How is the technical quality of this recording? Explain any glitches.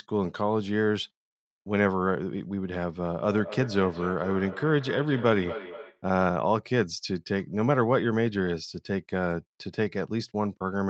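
The recording has one clear glitch, a stretch of feedback echo between two devices from 3.2 to 6.06 s. Throughout, nothing reaches above 8 kHz, consistent with the call codec's band limit.

In the feedback echo, a second device in the same room replays the call, and that playback loops back into this microphone. The echo canceller can't remove sound another device plays. Each sound returns about every 200 ms, peaking about 12 dB below the direct speech, thinner and ringier with each pass. Unlike room reverberation, the repeats are discrete and evenly spaced rather than a smooth decaying wash.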